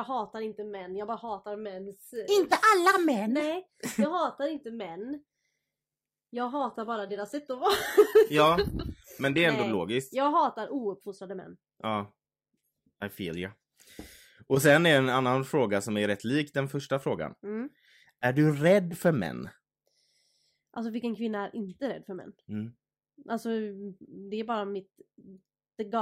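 From 5.44 s to 9.44 s the speech drops abruptly to an adaptive stream at a lower bitrate, most likely because the connection slowed and the player switched to a cheaper rendition. The change is instant, with no gap. For those four seconds nothing sounds above 14.9 kHz and codec artefacts become audible. This fits a switch from AAC-LC at about 96 kbit/s to HE-AAC at about 20 kbit/s.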